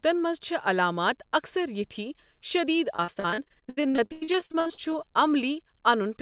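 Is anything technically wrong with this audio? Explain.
Yes. From 2.96 to 5.06 s the speech suffers repeated packet loss, giving a robotic sound. Dozens of short dropouts, the longest 94 ms, arrive in quick succession. Each is patched by extending the previous sound, so about 41% of that stretch is filler. It sounds choppy, with pieces missing. The call path's 4 kHz bandwidth limit, which fits a narrowband G.711-style codec, applies throughout.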